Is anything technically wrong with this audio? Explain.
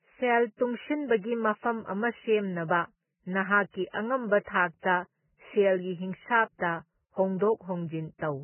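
Yes. Throughout the speech, everything above 3 kHz is missing and the remaining treble is hissy and grainy, likely from heavy Vorbis compression at a very low bitrate, around 9 kbps.

From 3.91 to 3.94 s there is pre-echo: the codec spreads quantisation noise across its block, so about 26 ms of hiss precedes a sharp attack and smears it.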